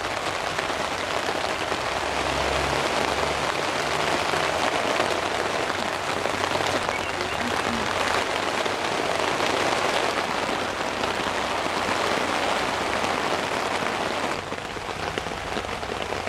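Sound recording, no technical faults detected.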